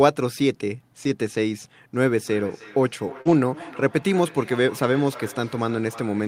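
At 1.03 s, a short stretch of about 40 ms is a lost packet rebuilt from error correction. The sound fits two packets that never arrived. The packets that followed carried low-bitrate copies of them, and the decoder played those copies. There is no gap. Those 40 ms sound rougher and grainier than the surrounding speech.

From 1.94 s to the end of the clip, a feedback echo between two devices runs under the speech. A second device in the same room plays back this call. Its microphone then sends that sound round again. Neither echo canceller removes the other device's playback. Each phrase returns roughly a third of a second later, thinner and more ringing. At its loudest the echo sits about 19 dB below the speech.

At 3.21 s there is a short concealed packet loss. About 40 ms of audio missed the decoder. The receiver filled 38 ms by stretching the sound that came before and then blended back into the real audio. 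It comes across as a brief smear.

That smear runs straight into a second lost packet rebuilt from error correction, from 3.25 to 3.31 s. Again the sound points to two lost packets. Another 40 ms is played from the coarse backup copy, so the roughness returns for a moment.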